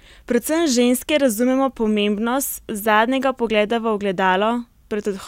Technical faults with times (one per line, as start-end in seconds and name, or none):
none